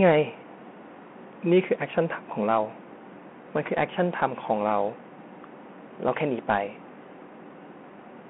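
Bluetooth CVSD headset codec throughout the speech: one-bit delta coding, consistent with a 64 kbps stream, confines it to 200 Hz–3.4 kHz, leaving scratchy s sounds and granular hiss.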